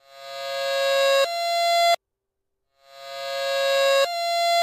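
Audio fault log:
No technical faults can be heard anywhere in the signal.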